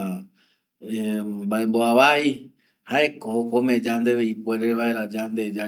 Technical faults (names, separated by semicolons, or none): clock drift between sender and receiver; repeated timing corrections